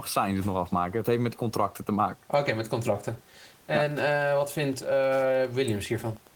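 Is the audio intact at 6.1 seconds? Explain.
No, there's Wi-Fi interference from 3.77 s to the end: a nearby radio's 102.4 ms beacon gets rectified, giving a quiet ticking about ten times a second, well under the speech.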